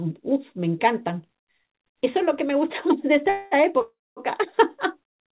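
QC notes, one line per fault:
3.29–3.54 s and 3.81–4.20 s, call audio freeze: the last sound is held as a fading buzz for about 0.22 s, then 0.35 s with the final 0.23 s silent. The likely cause is late packets draining the jitter buffer. The audio then resumes where it stopped. On a spectrogram this shows as a smeared, decaying band, then a blank gap in the second event.
5.10–5.19 s, short stall from a late packet: one sound is stretched by 68 ms with a slight buzz before continuing. The waveform shows a brief repeated, flattened stretch with nothing lost.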